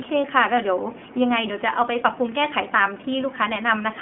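Throughout the speech the sound is thin, boxed and a little rough, with a synthetic edge and nothing above about 3.7 kHz. This is the iLBC codec coding each 20 ms frame independently, with the band held near 200 Hz to 3.4 kHz, at a 15.2 kbps setting.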